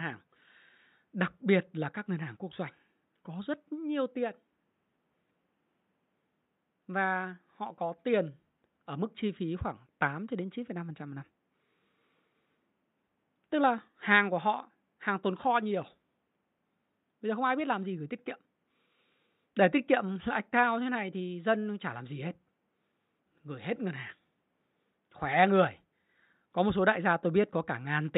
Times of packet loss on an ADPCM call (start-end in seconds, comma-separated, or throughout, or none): none